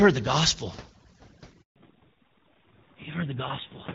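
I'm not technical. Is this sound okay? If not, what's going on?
No. Overdone noise removal runs through the whole clip. The background drops and breaks up into twinkling specks. Unlike a plain muffled line, the damage flickers, because quiet parts of speech get switched off with the noise.

At 1.62 s there is a handover gap: the call jumped between networks and the voice drops to silence for about 140 ms, until 1.76 s. It fades out fast rather than crackling, so it is a brief break in delivery, not a faulty connection.

Right after that, from 1.76 s to the end, comes a fallback to narrowband. The call leaves HD Voice, which sounded reasonably clear before this point, for an older phone-quality mode. Everything above 4 kHz vanishes, so the voice turns duller and rougher and stays that way, instead of recovering as it would after a brief dropout.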